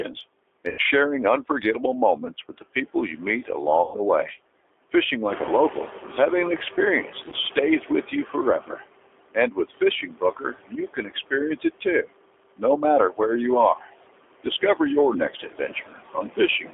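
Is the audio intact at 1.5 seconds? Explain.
No. At 1.5 seconds the speech carries two faults, and both run through the whole clip.

The first is noise suppressor artifacts. The suppressor estimates which frequency bands hold steady background noise and pulls them down, frame by frame, by about 21 dB. Between phrases the noise drops away. When speech resumes, the noise returns underneath it.

The second is G.729 codec damage, and it is plainly audible. The voice is rebuilt from a vocal tract model, a pitch predictor and a few pulses per short frame. The result sounds rough and synthetic, which fits an 8 kbit/s G.729A stream. The band is held to 300 Hz to 3.5 kHz, so the voice loses both its low body and its high detail.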